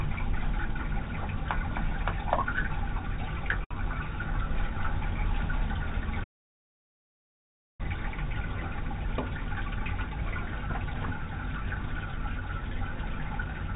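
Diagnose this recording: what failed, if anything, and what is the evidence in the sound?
Short stall from a late packet, at the network and jitter-buffer stage: from 3.64 to 3.78 s a sound is held too long. A packet arrived late, the buffer ran dry, and the receiver stretched the last audio by about 65 ms before resuming at the same point. Nothing is skipped.

Audio dropout to silence, at the input or driver stage: from 6.24 to 7.80 s the sound cuts out to silence, with no room tone, for about 1.55 s. The likely cause is that the input was lost, so silence was written and that stretch of audio is gone.

Jitter buffer speed-up, in the receiver's buffer handling: from 8.94 to 9.89 s the audio runs at 107% speed with no change in pitch. Repeated cuts of short pitch-period segments, totalling around 70 ms, drained excess buffered delay. The 4 kHz band limit throughout fits G.711 mu-law at 64 kbps.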